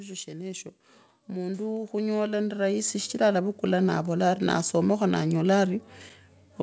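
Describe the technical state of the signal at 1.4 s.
At 1.4 s the automatic gain is rising. It runs from 1.32 to 5.13 s. The gain control judged the input too quiet and kept lifting its level. Voice and background swell together, gaining about 11 dB over nearly four seconds. The whole call-path sound has nothing above 8 kHz.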